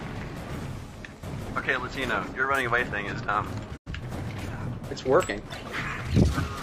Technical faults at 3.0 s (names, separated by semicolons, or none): none